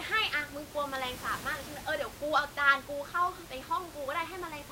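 No technical faults can be heard in this speech recording. The room's own background noise sits steadily underneath, about 15 dB below the speech, as part of the recorded space.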